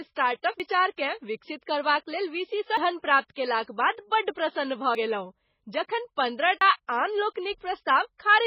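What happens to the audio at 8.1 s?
At 8.1 s the speech is still passing through heavy MP3 compression, which runs the whole clip. The encoder is likely starved of bits, as at roughly 16 kbps, so it cuts the treble at a fixed frequency and zeroes weaker frequency lines that then flicker on and off between frames. The result is dull, band-limited speech with a watery, swirling texture, metallic chirps on s sounds, and smeared consonant onsets.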